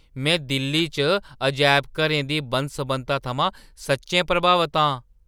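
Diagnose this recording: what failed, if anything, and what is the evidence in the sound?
Nothing in the recording points to a failure at any stage of the chain. The speech carries no audible evidence of a fault to diagnose.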